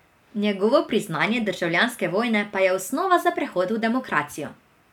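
No technical faults can be heard at any point in the clip.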